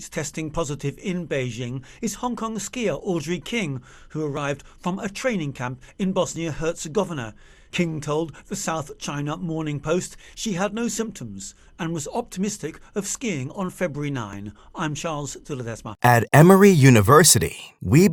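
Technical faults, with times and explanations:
2.37, 4.37, 6.36, 8.36, 12.34 and 14.33 s: overlap between stream segments. Each event is a brief click or tiny skip. The sound is delivered in 2-second segments whose time stamps overlap slightly. The player trims the overlap, but that material was not actually duplicated. So between 10 and 16 ms of real audio disappears at each join. The waveform jumps across the gap. The spacing follows the segment boundaries.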